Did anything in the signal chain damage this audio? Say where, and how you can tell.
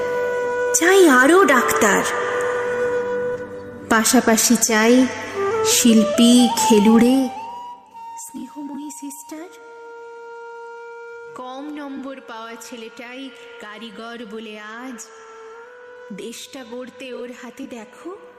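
Yes. From 6.96 to 7.82 s a fast ticking, zipper noise, rides on the audio as the level falls by around 20 dB. The gain stage applying the level, in the driver or buffer processing, moves it in 1 dB jumps at roughly 20 per second with no ramp between them, so each abrupt step leaves a small click, and the run of clicks forms the zipping.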